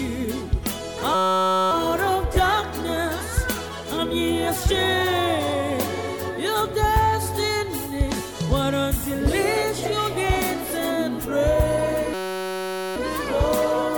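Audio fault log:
1.15–1.71 s and 12.14–12.96 s, system hang loop: a 5.33 ms slice, which fits a 256-sample buffer, repeats exactly, giving a steady 188 Hz buzz rather than a gap or a choppy stutter.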